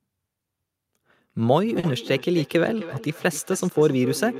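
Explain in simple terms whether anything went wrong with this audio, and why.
Two devices in the same room were on one call, and one microphone picked up what the other was playing. This is a feedback echo between two devices. From 1.62 s to the end, the speech comes back about every third of a second, fainter and more ringing each time.

A packet also arrived late, at 1.79 s, and the receiver briefly had nothing new to play. This is a short stall from a late packet. It held the last sound for 40 ms until 1.85 s, then continued. Nothing was lost, but one sound lingers.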